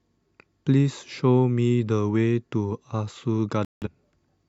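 A digital broadcast dropout occurs from 3.65 to 3.88 s, near the end of the speech. The receiver stopped getting decodable frames, either because the signal was lost or because frames failed their error check, so it muted its output rather than play corrupted data. The speech cuts to silence and resumes further on, with about 0.17 s of the programme missing, which fits a handful of consecutive lost frames.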